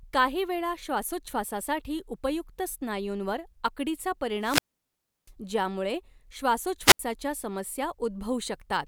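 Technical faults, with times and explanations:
4.39–5.32 s and 6.85–6.99 s, wireless microphone squelch dropout: twice the radio link from an analogue FM mic fades far enough that the receiver's squelch shuts the output off. Right after "श्वासोच्छवासासाठी उपयुक्त स्नायूंवर आकडीचा" you get a quick swell of hiss, then a hole of near silence lasting about 0.69 s before the speech comes back. The second one is the same thing in miniature, with a mute of only about 75 ms.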